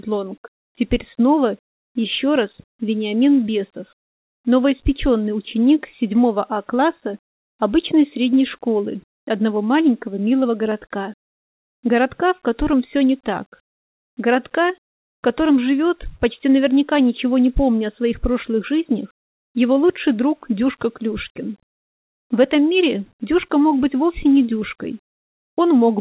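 No technical faults can be heard in this audio.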